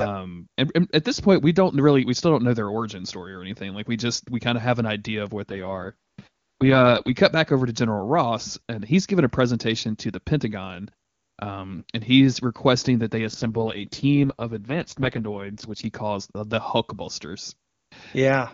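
From 5.50 to 7.14 s and again from 13.28 to 15.86 s, the speech turns rough and raspy: an AMR rate drop, consistent with AMR-WB falling from 23.85 to 6.6 kbit/s. The spectrogram keeps its full band without gaps, but harmonics blur into grainy noise.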